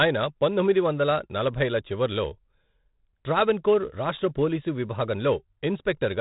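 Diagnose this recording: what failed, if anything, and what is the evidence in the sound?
The codec's the culprit: heavy 4-bit ADPCM compression throughout. Gritty hiss rides every loud syllable, attacks smear where coarse steps lag, and nothing survives above 3.8 kHz, which fits a 32 kbps stream.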